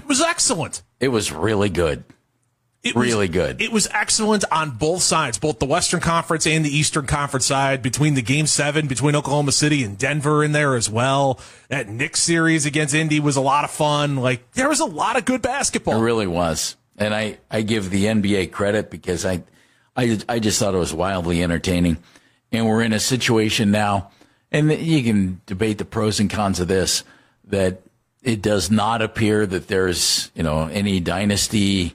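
No technical faults can be heard anywhere in this audio.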